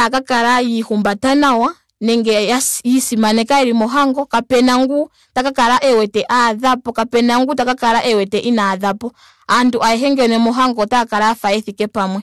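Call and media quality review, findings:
Hard clipping throughout the speech: harsh fuzz on every loud syllable. Gain stage driven about 14 dB past full scale, peaks sliced flat. Waveform shows squared tops on roughly 7 percent of samples; spectrogram shows harmonic smear reaching high frequencies.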